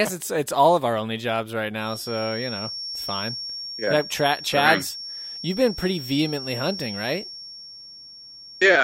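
Feedback whistle from 1.77 s to the end: a 5.5 kHz tone under the speech, likely a speaker-to-mic loop held at the edge of runaway.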